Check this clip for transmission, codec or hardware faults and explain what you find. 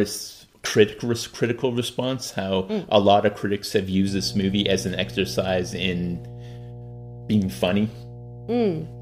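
One hardware fault. Mains hum, from 4.07 s after "lot of critics have" to the end: a ground loop or nearby transformer couples the 60 Hz power line into the signal, heard as a steady low drone roughly 15 dB under the speech.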